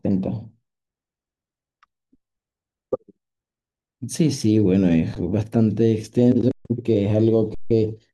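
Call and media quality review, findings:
Underrun with held sample at 5.15 s (11 ms), 6.52–6.65 s (134 ms), 7.55–7.71 s (160 ms). Speech stops silently with little or no click, then resumes where it left off. Output buffer starved; converter held last value. Waveform: flat line. Spectrogram: blank vertical gaps.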